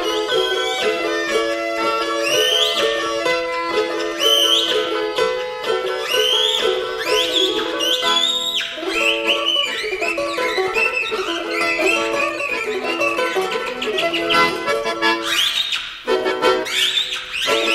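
No technical faults can be heard anywhere in the audio; the signal stays continuous and stable throughout.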